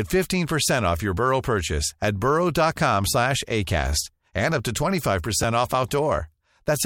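Chunks out of order at 5.43 s: a 5.8 ms chunk of speech plays one chunk late, so the swap leaves a brief jumbled moment.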